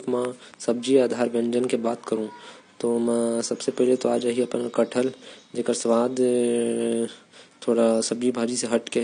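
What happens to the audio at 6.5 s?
At 6.5 s the speech carries the same AAC compression damage heard through the whole clip, with nothing reaching above 9.8 kHz. The encoder has quantised the spectrum coarsely to fit the bitrate, so high bands are cut off and sparse regions go hollow. The sound is dull and smeared, with a watery warble on sustained sounds and fizzy sibilants, which likely points to an AAC-LC stream near 32 kbps. The faint room noise sits about 40 dB below the speech.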